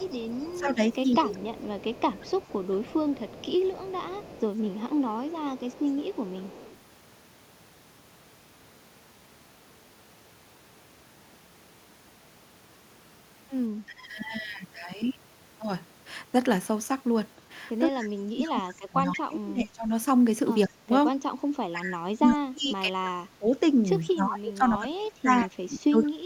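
Echo leak runs from 0.0 to 6.77 s: a faint copy of the speech trails it by 177 ms, about 25 dB down. It is likely caused by a far-end loudspeaker whose echo canceller let part of the microphone pickup return down the line. Speech suppressed in double talk appears at 0.6 to 1.28 s, with dips of about 15 dB over roughly 0.2 s, and again at 5.98 to 6.13 s, where it drops by about 25 dB. These dips are likely caused by the canceller's failure to tell this talker from the echo while both sides were active, so it attenuated both. A shallower dip of about 10 dB follows at 13.87 to 14.05 s. From 17.92 s to the end, the suppression becomes heavy, cutting the speech by up to about 30 dB in pieces that total around 5 s. Within that stretch the echo leak returns briefly at 19.13 to 19.19 s, about 15 dB down, and at 25.4 to 26.07 s, about 20 dB down, still 177 ms behind.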